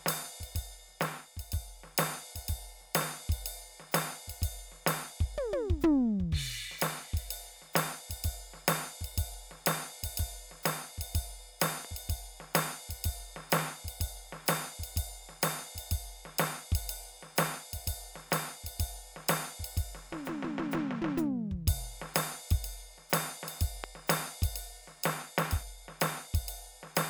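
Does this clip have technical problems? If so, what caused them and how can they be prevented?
Yes, there are loud pops layered over the music. Around 11.63 to 11.87 s you get a quick double pop, roughly 10 dB above the music, and at 23.84 to 23.86 s there's a single, much louder one, around 20 dB over it. The music keeps going underneath both. That's the signature of a voltage spike hitting the signal path, likely a cable being plugged in, a switch flipped, a static discharge or a driver hiccup, which the downstream circuitry then shapes into a thump. To prevent it, mute or power down the chain before touching connections or switches, and keep cables and drivers in good shape.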